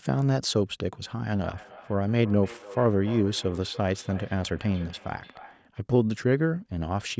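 From 1.35 to 5.71 s, feedback echo between two devices sends the speech around a loop, so it returns roughly every third of a second, thinner, ringing, and about 19 dB below the speech.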